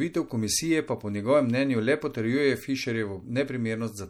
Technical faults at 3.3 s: MP3 compression

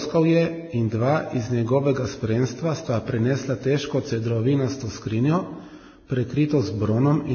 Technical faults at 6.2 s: transcoding between lossy codecs

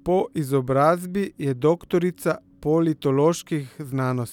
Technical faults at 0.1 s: none

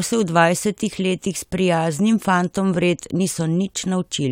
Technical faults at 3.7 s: none

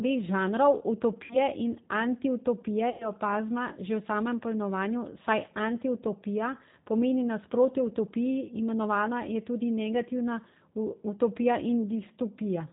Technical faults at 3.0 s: G.729 codec; VoIP packet loss concealed by the speech codec

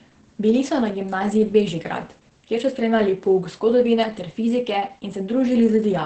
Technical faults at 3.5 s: Opus voice compression

